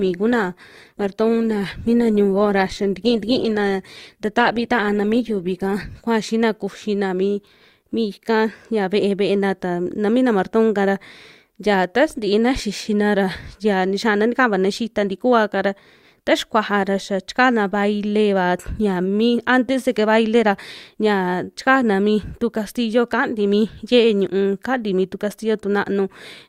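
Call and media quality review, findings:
Adaptive stream starting at a low bitrate, 0.0 to 6.0 s. Speech dull, treble absent or synthetic, heavier codec smearing, which fits a low-rate Opus rendition near 16 kbit/s. Probable component: player rate adaptation. Opened on the cheap rendition for fast start, then switched up after measuring throughput. Abrupt quality jump at 6.0 s, no gap. Afterward, bandwidth reaches about 20.2 kHz, consistent with roughly 64 kbit/s Opus.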